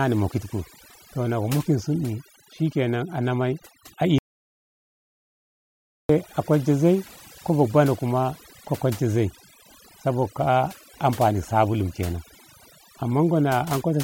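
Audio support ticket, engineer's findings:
Overdone noise removal, whole clip. Background dropped, with twinkling specks where isolated bands survive. Noise reduction set too aggressive. Bands near the noise estimate cut hard or removed, and quieter speech detail in those bands goes with them. Spectral suppressor in the processing chain.

Audio dropout to silence, 4.18 s to 6.09 s. Sound cuts out abruptly and returns mid-flow. About 1.9 s lost. Gap is silent, with no room tone. Likely cause: input signal lost through a disconnect, link failure or mute while the recorder kept writing silence. Content in the gap unrecoverable.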